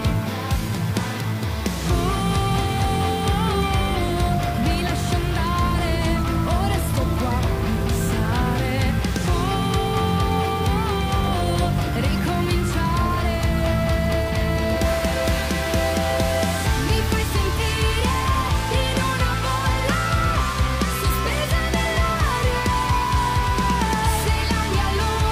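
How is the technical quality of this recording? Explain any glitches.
The recording's quality is marred by one fault, an unreliable data bit, running from the start to 17.72 s. One bit of each sample word flips at random, adding identical spikes of about -33 dBFS. The result is a steady fizzy crackle that continues through pauses. On a waveform this shows as scattered needles of equal height. A spectrogram shows broadband speckle across all frequencies that stops abruptly at 17.72 s.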